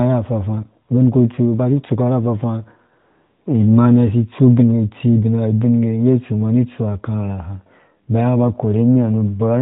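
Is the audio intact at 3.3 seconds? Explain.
No. At 3.3 seconds the audio falls inside a stretch of AMR comfort noise, from 3.00 to 3.46 s, just after "si itsuko ra afafaa". For these 0.46 s the phone treated the talker as silent and sent no speech frames. The receiver filled the gap with synthetic noise, built from a rough estimate of level and spectrum. The real background gives way to a smooth, steady hiss that switches in and out. This happens within the narrowband AMR-NB signal.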